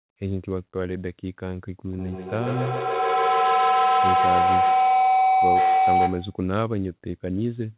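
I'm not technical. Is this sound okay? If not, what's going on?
No. From 1.93 to 6.46 s there is feedback howl: the sound loops between microphone and loudspeaker, growing into a tone near 700 Hz, with each trip around the loop taking about 0.15 s. Unlike an echo, it gets louder instead of fading.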